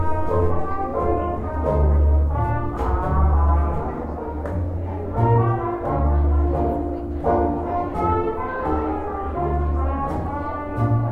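No technical faults can be heard anywhere in this recording of sounds. There are no events to place in time order.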